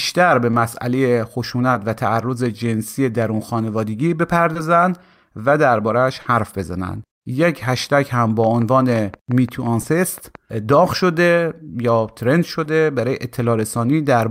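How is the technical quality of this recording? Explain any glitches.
The recording has two kinds of glitch: repeated brief dropouts and a short burst of clicking.

Short concealed packet loss at 0.51–0.55, 1.73–1.77, 4.53–4.57, 6.21–6.27, 9.81–9.85 and 12.63–12.67 s: missing 20 ms chunks (40 ms at 6.21 s) were patched by extending the preceding sound, heard as brief smears or wobbles.

Train of clicks from 8.44 to 10.36 s: around ten evenly spaced pops at 5.75 per second, peaking roughly 5 dB above the speech, likely from electrical interference or a faulty connection or power supply.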